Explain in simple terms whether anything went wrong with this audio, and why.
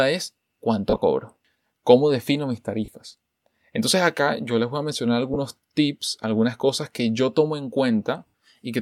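The speech has four brief dropouts from lost LE Audio frames, at 0.90–1.02 s, 2.85 s after "defino mis", 5.34 s between "les voy a mencionar" and "tips algunas cosas que", and 8.27–8.34 s after "que yo tomo en". The Bluetooth decoder patched each gap by recycling the last bit of sound, so you hear a short fuzzy smear.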